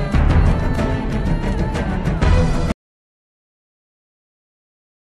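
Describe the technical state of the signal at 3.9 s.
An audio dropout to silence covers 3.9 s. It begins at 2.72 s and lasts to the end of the clip. The sound is cut off abruptly mid-flow and replaced by silence, with no room tone or noise floor underneath. The input was likely lost, through a disconnected device, a failed link or a mute, while the recorder kept writing silence, so whatever occurred after 2.72 s is simply absent.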